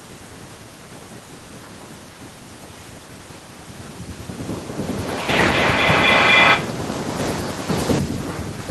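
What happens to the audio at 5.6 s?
At 5.6 s the speech is caught in feedback echo between two devices, running from 4.82 to 6.89 s. One device replays what another's microphone sent, that microphone picks it up again, and neither echo canceller removes the other's playback. Each word returns about every third of a second, thinner and more ringing each time, and the repeats build to about 11 dB above the speech rather than fading, which sets it apart from a single decaying echo or room reverberation.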